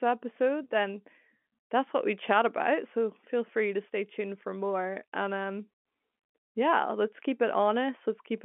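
Nothing technically wrong can be heard in this speech recording. It carries the narrow band of G.711 telephone coding, with the sound confined to roughly 200 Hz to 3.4 kHz, and any coding damage is no more than faint.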